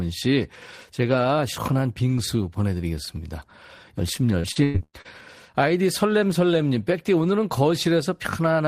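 From 4.39 s to 5.07 s the stream suffers repeated packet loss (robotic sound): audio data goes missing or arrives too late five times in quick succession, and each hole is patched by stretching out the last received sound. About 320 ms is filled this way, nearly half of that stretch, with the longest gap lasting 103 ms. The speech there turns choppy, with pieces of the signal missing.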